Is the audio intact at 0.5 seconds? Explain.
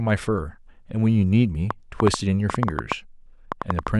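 Yes, at 0.5 seconds the speech plays through intact, with no dropout, click, distortion or other fault audible at that point.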